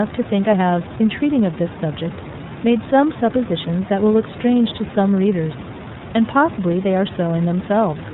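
From start to finish the speech passes through the iLBC codec, and the damage is plainly audible. Nothing above 4 kHz survives, so consonants lose their edge, and each 30 ms frame's excitation is coded on its own, leaving voiced sounds slightly rough and synthetic, which fits the 13.33 kbps mode. Unlike plain G.711 telephone audio, which is band-limited but smooth, this adds a buzzy texture, and the room noise, about 13 dB below the speech, is coded poorly.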